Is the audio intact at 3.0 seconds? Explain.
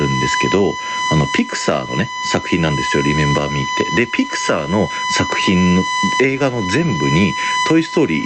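No. At 3.0 seconds, as throughout the clip, a steady, fixed-pitch whine sits at 1 kHz, only about 10 dB below the speech. This is USB whine: the bus pulls current in 1 ms frames, and that periodic draw leaks into the audio through shared power or ground.

The same moment also carries gain pumping. The level swings by around 15 dB, so the speech sounds squashed. The likely cause is a gain set far too high, with a fast limiter or compressor clamping down on every peak.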